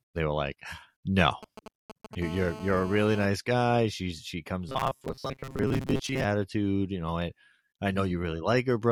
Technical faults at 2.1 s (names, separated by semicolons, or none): GSM signalling bursts